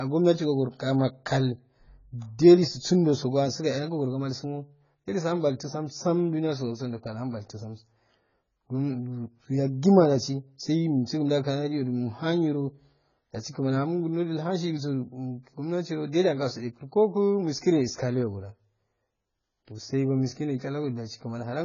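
From start to end of the speech, nothing sounds above 7 kHz, and sibilants fizz and warble instead of merely dulling. That marks heavy AAC compression, likely AAC-LC at a low bitrate near 16 kbps. A plain low-pass filter would muffle without this swirling texture.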